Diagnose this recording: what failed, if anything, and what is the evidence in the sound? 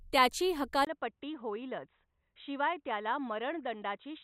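Input switched to a poorer device at 0.85 s, likely a driver-level change: a 20 ms gap, then nothing above 3.9 kHz, about 5 dB quieter, with faint background noise.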